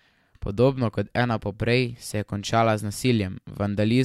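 No technical faults can be heard in the speech here. The audio stays steady throughout, with nothing that disturbs it at any point.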